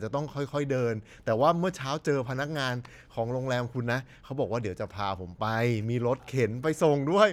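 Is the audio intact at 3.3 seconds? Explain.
Yes, at 3.3 seconds the speech plays through intact with no audible fault.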